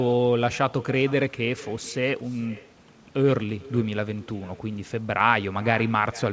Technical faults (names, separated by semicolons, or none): echo with no canceller